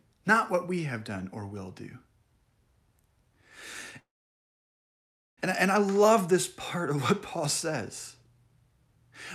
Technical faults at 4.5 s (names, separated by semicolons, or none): call audio freeze